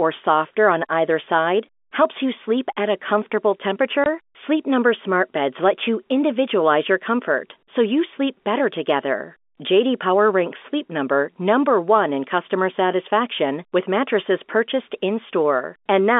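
At 4.04 s the speech drops out for a brief 20 ms hole with hard edges. This is packet loss filled with silence: a single packet never arrived, and the receiver played nothing in its place, under the narrow telephone band of the G.711 coding.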